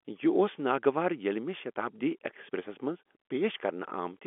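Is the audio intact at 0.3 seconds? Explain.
Yes, at 0.3 seconds the speech is intact, carried through G.711 telephone coding with its narrow line band topping out around 3.4 kHz, nothing above 3.7 kHz, and no fault present at that moment.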